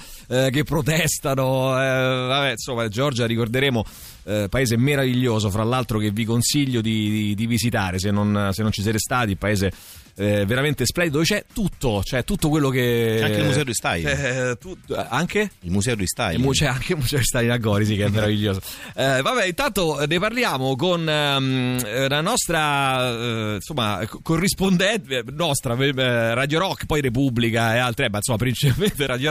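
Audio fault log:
No faults are audible anywhere in the audio.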